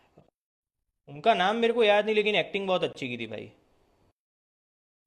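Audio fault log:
2.93–2.95 s, gap between stream segments: an 18.5 ms hard-edged silent hole cuts the speech where two segments' time stamps leave a gap; no audio lost.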